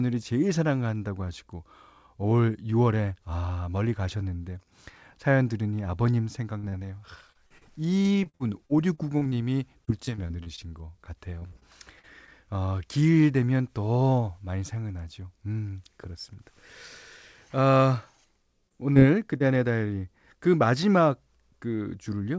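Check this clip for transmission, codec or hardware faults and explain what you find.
Yes, there are faults: two stretches of repeated packet loss and three short concealed packet losses. The call path itself carries nothing above 8 kHz, which fits a wideband call codec such as G.722.

Repeated packet loss (robotic sound), 6.58 to 10.59 s and 11.39 to 12.29 s: Audio packets went missing or arrived too late over and over. The receiver patched each hole by extending the sound that came just before it. In the first stretch the gaps come in quick succession, the longest about 51 ms, and roughly 13% of that stretch is filled-in sound. The second stretch has five gaps, the longest about 43 ms, with about 15% concealed. The speech turns choppy, with small pieces clipped out.

Short concealed packet loss, 18.69 to 18.84 s, 18.94 to 18.98 s and 19.38 to 19.42 s: Each time, about 20 ms of audio failed to reach the decoder in time. 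The receiver bridged the hole by carrying on the preceding sound and then blended back into the real signal. In the first event the patch also stretches the timing slightly, adding a sliver of about 10 ms. Each one sounds like a brief smear or wobble in the speech.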